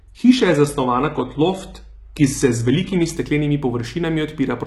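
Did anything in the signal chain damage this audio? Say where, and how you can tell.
Yes. From the start to 3.17 s the speech has an adaptive stream starting at a low bitrate, a fault at the streaming and playback stage. The top end is dull or synthetic-sounding, with nothing above 11.8 kHz and stronger codec smearing, which fits a roughly 16 kbit/s HE-AAC rendition. At 3.17 s the quality steps up abruptly with no gap, consistent with a switch to about 96 kbit/s AAC-LC. Packet loss would leave dropouts, and a bandwidth squeeze would come and go rather than improve once and stay improved.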